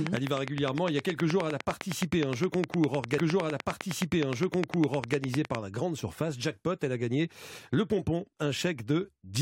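From 0.07 s to 5.56 s a train of clicks runs through the speech. The clicks come at a steady 9.75 per second, around forty in all, and peak well above the speech, roughly 20 dB higher. They tick through pauses too. Interference from nearby equipment is the likely cause.

At 3.17 s a stream segment is repeated. The player queued the same stretch twice, so about 2.0 s of speech plays again, ending at 5.17 s. A small blip marks the jump back. The clicks continue over the repeat.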